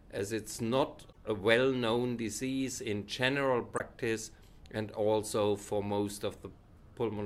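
At 1.09 to 1.17 s and again at 3.75 to 3.80 s, damaged data in a compressed stream produces brief glitches of roughly 80 ms and 50 ms. Corrupted bytes made the decoder misread those frames and hunt for the next valid header before output resumed. On a spectrogram each shows as a narrow vertical break in the surrounding pattern. The waveform shows a short stretch that does not match its neighbours.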